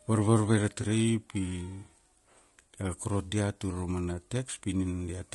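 Throughout, the speech sounds rough and grainy, with noise between the harmonics and a synthetic top band; this is likely low-delay AAC compression, fitting AAC-ELD near 32 kbps, rather than a band-limited line. From 0.81 to 0.84 s, just after "varvarve ra", AAC frame loss with concealment leaves a brief smeared, phasey patch, consistent with one lost frame, not a hard dropout to silence.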